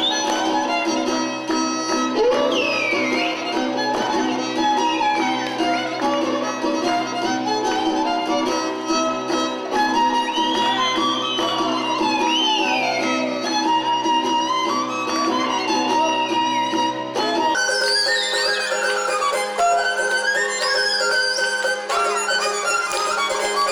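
From 17.55 s to the end at 23.72 s, the sound abruptly turns high and hurried, rising by roughly seven semitones while everything moves at 1.61 times its proper pace. This is a section at the wrong speed: pitch and tempo jump together at the same instant, the way they do when samples are simply clocked out too fast. The likely cause is an editor or player handling that stretch of audio at a mismatched rate.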